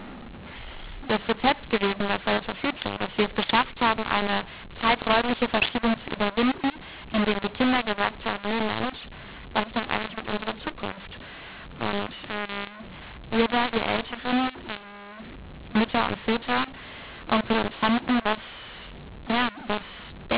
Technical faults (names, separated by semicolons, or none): mu-law and A-law mixed up